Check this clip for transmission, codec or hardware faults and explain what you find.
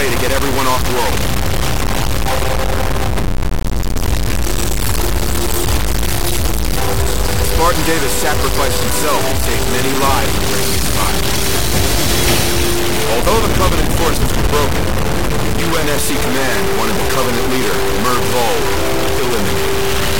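One fault runs through the whole clip: low bit depth without dither. A grainy distortion roughly as loud as the sound itself follows every change in level and vanishes with it. That points to a likely truncation to about 3 bits. Steady hiss would stay put instead.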